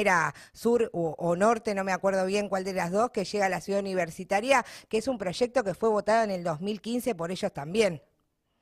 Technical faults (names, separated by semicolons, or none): none